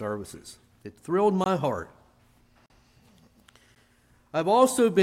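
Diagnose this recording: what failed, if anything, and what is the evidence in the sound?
Blocks of digital silence at 1.44–1.46 s, 2.66–2.70 s and 3.75 s, which points to a driver or buffer underrun: zeroed samples give flat-line waveform gaps with abrupt edges.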